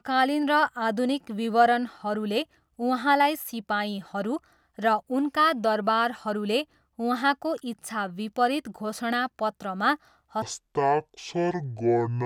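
From 10.42 s to the end at 12.25 s, a section at the wrong speed drops the speech to 0.553 times its proper rate, likely from a clock mismatch in playback or editing. It turns slow and about ten semitones deeper. A spectrogram shows harmonics squeezed downward and syllables stretched wider.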